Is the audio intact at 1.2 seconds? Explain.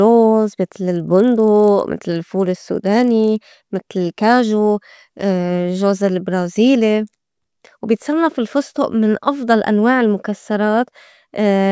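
No. At 1.2 seconds the speech carries a resampler restarted on every block fault, running from 0.8 to 4.52 s. Each short block was converted separately, so its edges lacked real neighbouring samples. The errors form a 25 Hz buzz under the speech, which fits 40 ms blocks.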